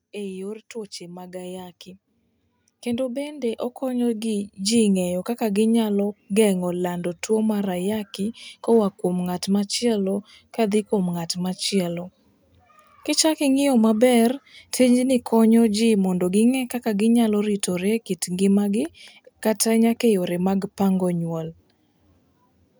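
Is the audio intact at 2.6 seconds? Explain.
No, at 2.6 seconds automatic gain rising is underway (0.12 to 5.36 s): the control lifts a too-quiet input by about 15 dB, so speech and background swell together slowly, unlike fast compressor pumping.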